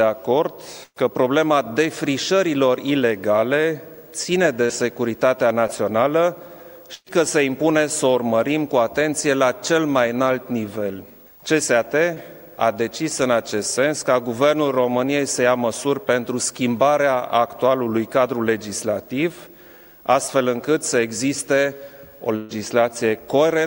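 A burst of packet loss at 0.83 to 0.98 s drops about 120 ms. The receiver extends the last sound and fades it, leaving a held buzz or hiss that falls to about 50 ms of silence before the audio resumes further on. Short concealed packet loss follows at 4.66 to 4.71 s (about 40 ms lost) and 5.67 to 5.71 s (about 20 ms). Each hole is patched by continuing the preceding sound and blending back in, heard as a brief smear or wobble. A second burst at 6.95 to 7.08 s loses about 120 ms, with a fading tail and about 40 ms of silence. Another short concealment at 12.14 to 12.18 s covers about 20 ms. The final burst, at 22.36 to 22.57 s, loses about 140 ms and is filled throughout with no silent stretch, so the extended sound runs straight into the resumed audio.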